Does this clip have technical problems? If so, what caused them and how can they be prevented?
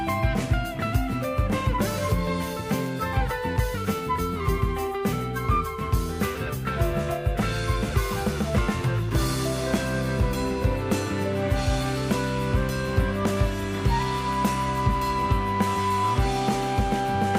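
No, nothing technical stands out in this clip, so there's nothing here that needs preventing.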